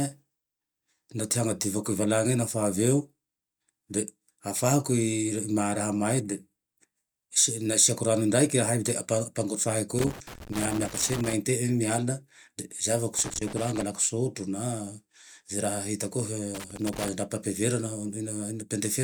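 At 9.99 to 11.33 s, again at 13.19 to 13.82 s and at 16.54 to 17.09 s, the speech is broken by loose connector crackle: a worn or dirty contact keeps making and losing its connection, chopping the signal into ragged fragments. Unlike regular digital clicks or buffer dropouts, the bursts are irregular in timing and texture, scratchy rather than evenly spaced ticks.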